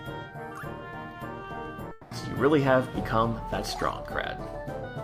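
A long network dropout, most likely, runs from 1.91 to 2.13 s: about 200 ms of audio is lost and replaced by a fading, buzzy continuation of the preceding sound. On a spectrogram the harmonics smear into a decaying band before the audio resumes further on.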